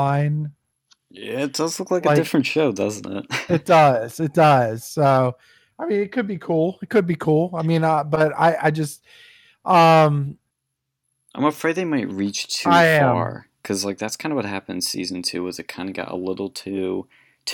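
A speech recording with nothing technically wrong to report.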